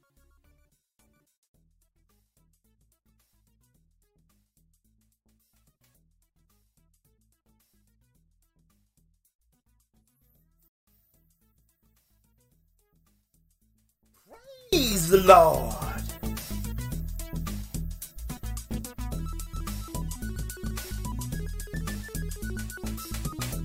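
One channel inverted is the likely cause of the problem from the start to 14.73 s: one stereo channel appears to have its polarity flipped, so whatever the two channels share cancels once they are combined to mono. The result is audio that drops by about 34 dB, with centred material and low end almost gone and only a faint residue of the difference between the channels left, until the full sound returns at 14.73 s.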